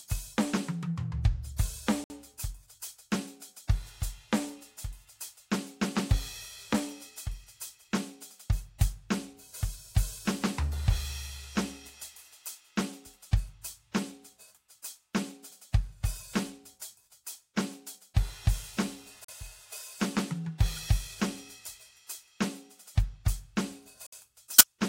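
Blocks of digital silence occur at 2.04 to 2.10 s, 19.24 to 19.28 s and 24.06 to 24.12 s, lasting 60, 40 and 60 ms. The music drops abruptly to zeros and returns without any fade, so each gap is a short hole, consistent with the output buffer not being filled in time.

A corrupt frame is decoded from 24.53 to 24.67 s, spanning about five frames. Flipped bits in the compressed data were played anyway, so misread gains and codes push energy into the wrong frequencies, producing a brief squeaky burst of noise over the music.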